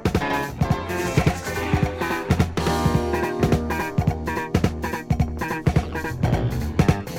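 Throughout the clip, channel delay (doubling) leaves every event followed by a same-level repeat about 93 ms later, which fits one channel lagging by a 4096-sample buffer before mono summing. The waveform shows each onset twice, and the spectrogram shows duplicated, offset transients.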